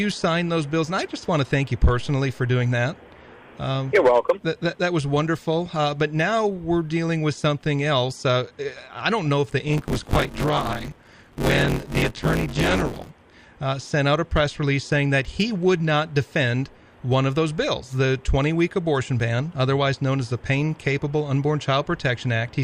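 A robotic 100 Hz buzz rattles through the sound from 9.68 to 13.11 s, from buffer tearing: most of each 10 ms period replays audio about 20 ms stale, with hard joins.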